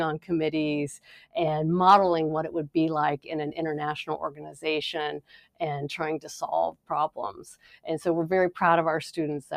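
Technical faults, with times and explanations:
Throughout: noise suppressor applied to music or sounds. A speech-tuned suppressor keeps treating steady parts of the sound as noise. Its gain swings by around 10 dB. Attacks pass, but held tones and tails sink, so the level pumps and thins.
0.99–1.36 s, 4.30–4.62 s, 5.18–5.61 s, 6.72–6.91 s, 7.09–7.87 s: sound cut by the noise suppressor. In each span the suppressor clamps down harder, by about 12 to 18 dB at the deepest. Sustained material drops away or its decay is cut short.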